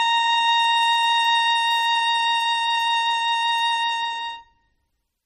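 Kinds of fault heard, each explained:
MP3 compression: the music sounds watery and swirly throughout, with metallic chirping on bright sounds and smeared attacks, likely from low-bitrate MP3 encoding around 32 kbps. On a spectrogram, nothing appears above 14 kHz, and the upper region shows flickering holes where weak components drop in and out.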